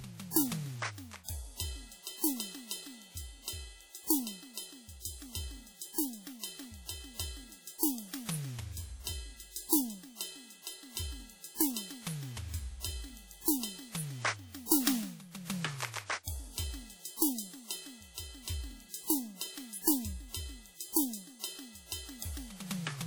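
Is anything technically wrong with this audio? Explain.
Yes. Plainly audible codec damage runs through the whole music clip, likely WMA compression. Long transform blocks spread coarse quantisation noise over tens of milliseconds and discard weak detail, which fits a low bitrate around 48 kbps. The result rings and smears, with a washy hiss that breathes with the music.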